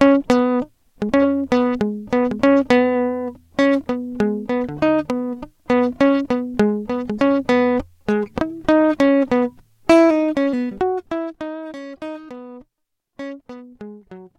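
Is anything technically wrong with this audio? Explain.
Yes. The music has zipper noise from 10.61 to 11.46 s. The level falls by roughly 15 dB, applied in coarse steps about 100 times a second without smoothing. Each step adds a tiny click, so a fast zipping buzz rides on the fade.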